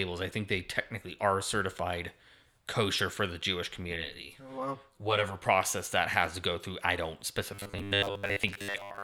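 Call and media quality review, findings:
Channel delay (comb filtering), 3.96 to 5.44 s, right before "that has to go". Hollow, phasey speech. One channel lags about 10 ms behind the other before the mono sum, which cuts fixed notches starting down near 40 Hz.

Robotic sound from repeated short buffers, 7.52 s to the end, just after "go through I don't". The speech turns into a rigid metallic buzz at 100 Hz. The likely cause is starved playback looping a 10 ms buffer, with most of the real audio skipped.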